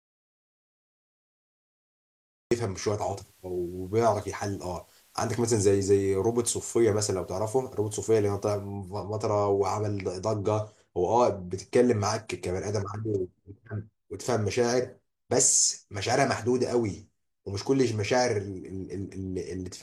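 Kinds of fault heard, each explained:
Audio dropout to silence: The clip opens in dead digital silence, with no room tone at all, and the speech only arrives at 2.51 s, coming in mid-flow rather than from a natural pause. The likely cause is a lost input, such as a disconnected device, a broken link or a mute, while recording carried on writing silence. Unlike a level fade or a noise gate, there is no tail or residual hiss; the signal is simply absent.
Digital radio blending to analogue: From 2.98 s to 8.81 s the receiver falls back from its digital stream to the FM broadcast of the same station, cross-fading over about 272 ms at each end. There is no level jump, but a layer of FM hiss appears, sitting roughly 35 dB under the speech. Unlike a codec dropout, the audio never stops; it just changes character for that stretch.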